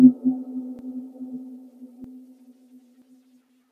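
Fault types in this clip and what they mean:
Dropped buffer (overrun): You get three points where the sound abruptly jumps forward, at 0.79, 2.04 and 3.02 s, with no gap of silence at any of them. Each time a bit of audio simply goes missing and the two sides are butted together: roughly 50 ms at the first, about 100 ms at the second, and around 150 ms at the last. The likely cause is the capture side not reading its buffer in time, so the hardware overwrote it.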